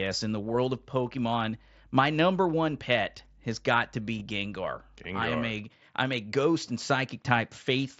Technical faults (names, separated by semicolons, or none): mains hum; concealed Bluetooth headset packet loss